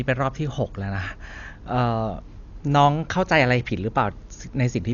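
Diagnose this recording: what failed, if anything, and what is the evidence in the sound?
Codec stage: throughout, the speech is dull with nothing above 6.9 kHz and heavy, rough fluttering noise, likely Dolby Digital compression at a low bitrate, consistent with about 48 kbps.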